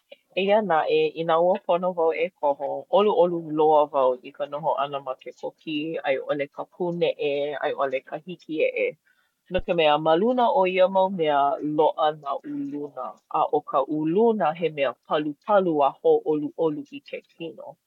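Speech clip with one clear fault: a phantom power thump from about 9.59 to 9.67 s. You get a short, deep thump peaking at about -19 dBFS, and it dies away fast, with a decay of around 18 ms. That's the signature of the supply being switched on or off while the input was live, so the voltage step pushes through the coupling capacitors and lands in the recording as a low-frequency knock.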